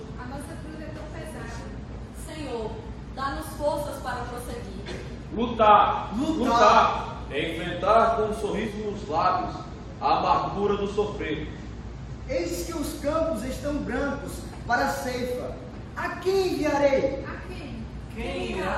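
At 8.63 s the sound blends from digital radio to analogue FM. The 143 ms cross-fade follows a lost digital signal. Faint hiss sits roughly 40 dB down. Level stays steady. Digital returns at 12.58 s.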